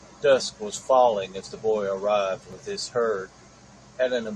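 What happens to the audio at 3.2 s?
Nothing goes wrong at 3.2 s; the speech continues intact through that moment, with no dropout, click or distortion.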